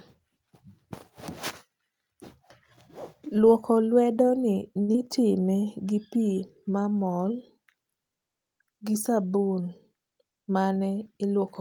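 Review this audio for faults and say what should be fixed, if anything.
A short stall from a late packet occurs at 4.81 to 4.90 s. A packet arrived late and the jitter buffer ran dry. The receiver held the last sound for 68 ms until the packet came. Then it resumed from the same point. Nothing is lost. The held sound drags slightly, with a slight buzz or dip. Playback now sits 68 ms later. Prevent this by giving the jitter buffer a little more target depth on this link.

Short concealed packet loss follows at 4.92 to 4.96 s. About 40 ms of audio never reached the decoder in time. The receiver covered only 19 ms of that gap, extending the last sound before blending back. The result is a brief smear or wobble, and a short sound can drop out. Removing the gap took back roughly 20 ms of delay. Prevent it with forward error correction or redundant packets on the sending side.

A jitter buffer speed-up runs from 10.11 to 10.47 s. 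The buffer held more audio than its target. The receiver trimmed small pitch-period pieces repeatedly to shed around 70 ms of delay. Speech plays at 115% speed with unchanged pitch. It sounds hurried for that stretch. Prevent this by smoothing network delivery so packets do not bunch up after delays.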